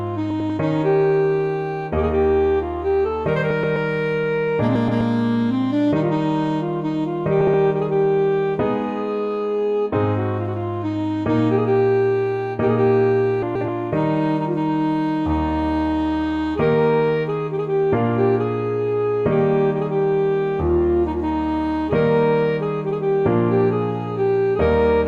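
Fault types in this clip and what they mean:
Frames out of order: two adjacent runs of frames were decoded swapped, so brief stretches of 128 to 256 ms play halves reversed, heard as a garbled flutter near 0.3, 3.5, 4.75, 7.4 and 13.4 s, without any time lost.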